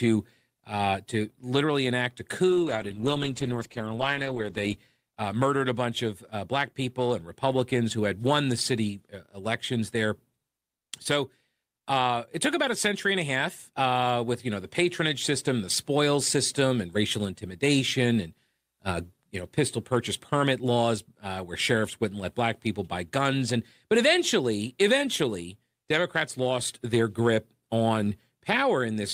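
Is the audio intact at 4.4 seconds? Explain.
No. At 4.4 seconds the speech is inside a call bitrate drop from 2.51 to 4.87 s. The call's bandwidth estimate fell, so the encoder coded more coarsely and cut the highs. The sound turns rough, watery or muffled, which fits a fall from about 64 to 12 kbps.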